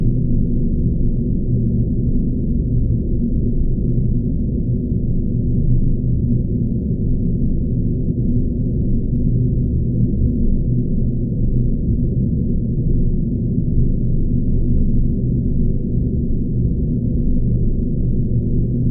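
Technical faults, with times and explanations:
No technical faults can be heard anywhere in the audio. Nothing in how it was captured or carried stands out as having gone wrong.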